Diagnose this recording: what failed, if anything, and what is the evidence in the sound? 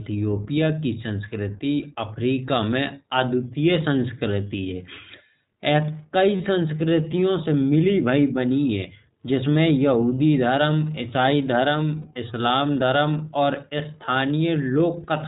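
The failure sits at the codec stage: the whole recording has passed through the iLBC codec, and its damage is plainly audible. Nothing above 4 kHz survives, so the speech is narrowband and loses its sibilant edge, and it carries a rough, slightly synthetic texture from frame-by-frame excitation coding. The band limit and grain fit the 15.2 kbps mode with 20 ms frames, each coded without reference to the previous one.

The second fault is in the network path: lost iLBC frames appear as two brief gaps that the decoder conceals. At 6.36 to 6.41 s, just before "संस्कृतियों से मिली भाई", a 40 ms stretch turns into a held, faintly buzzy vowel, which fits two lost 20 ms frames. At 12.02 to 12.07 s, just before "इस्लाम धर्म", a shorter 20 ms patch does the same. In each case the decoder repeats the last pitch cycle mixed with noise, and because the frames stand alone, the speech recovers immediately afterwards.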